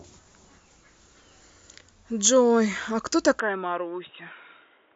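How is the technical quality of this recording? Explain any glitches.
The recording has one clear fault near the end. From 3.40 s to the end, the speech turns dull and boxy, which points to an input switched to a poorer device. Nothing above 3.8 kHz survives. The level falls by about 10 dB, and a new background noise appears. No gap marks the change. The likely cause is a switch to a narrower-band microphone or headset profile.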